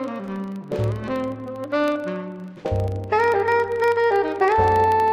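A filter restarted on every block loses its internal state at each block boundary and begins again from silence, so each block opens with a small transient. Throughout the clip these repeat 25 times per second, a buzz that rises and falls with the sound's level.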